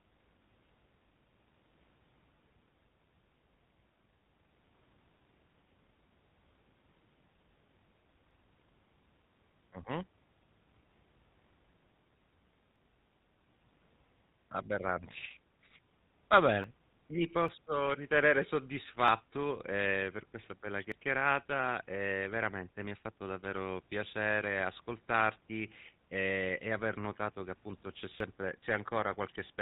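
Throughout, the speech has the buzzy, gravelly roughness of the GSM full-rate codec. The vocal tract is modelled and driven by a sparse pulse excitation at 13 kbps, and nothing above 4 kHz comes through, so the top end is plainly dull.

Small forward jumps in the sound occur at 8.31, 12.76, 14.89, 16.64, 17.48 and 19.08 s (just before "ehm per questa bella"), at 20.92 s (just after it) and at 28.20 s (after "notato che appunto c'è"). Each skips roughly 10 to 30 ms without leaving a gap. The likely cause is a dropped buffer (overrun): samples were overwritten before being read, and the audio on either side was joined directly.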